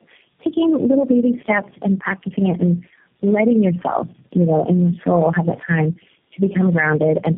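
Throughout there's tandem speech coding: four low-rate coders in series, each re-coding the last one's damage, leaving rough, muffled, warbly speech with nothing above 3.2 kHz.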